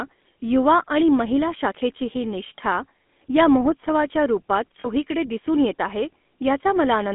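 GSM full-rate codec throughout: the audio is confined to roughly 200 Hz to 3.5 kHz and has a buzzy, gravelly roughness, which fits 13 kbps pulse-excited vocal-tract modelling.

Lost GSM frames at 2.58 s and from 4.80 to 4.87 s: the decoder repeated the last good frame, so the sound briefly holds as a rough metallic ring.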